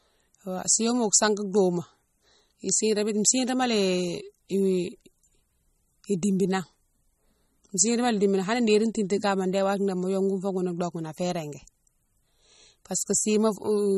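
Throughout the speech there is a plainly audible watery, swirling texture, smeared consonant attacks and nothing above 12.4 kHz, the signature of likely MP3 compression at a low bitrate around 32 kbps, where the encoder drops the treble and weak frequency lines flicker between frames.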